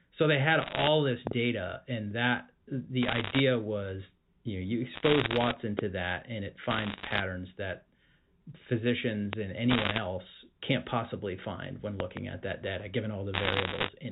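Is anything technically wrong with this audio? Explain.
Yes. The sound is speech carried on a G.711 mu-law telephone line, and two kinds of fault break into it.

Bit errors on the digital phone line occur at 0.62–0.88, 3.03–3.40, 4.94–5.54, 6.70–7.20, 9.70–9.98 and 13.34–13.89 s. Roughly one to two percent of bits are flipped, each corrupting a single sample, so the speech carries bursts of sharp crackling ticks.

Loud pops occur at 1.27–1.34 s (a double pop), 5.79–5.81 s, 9.33–9.35 s, and 12.00–12.19 s (a double pop). They are likely caused by voltage spikes from switching or static entering the chain. Each is a hard click or thump, about 15 dB above the speech for the first and about 20 dB for the others, and the speech continues underneath.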